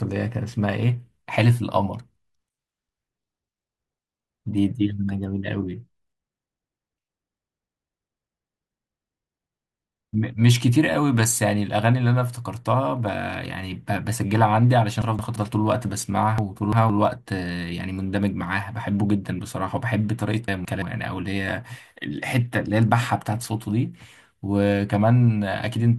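Three brief jumbled moments break the speech, at 15.02–15.36 s, 16.38–16.90 s and 20.48–20.82 s, each a garbled moment. These are chunks out of order: the audio is handled in blocks of about 171 ms, and one block arrived late and played after the block or blocks meant to follow it, one block late at 15.02 and 20.48 s and two at 16.38 s. Nothing is missing, but the misplaced block creates hard edges.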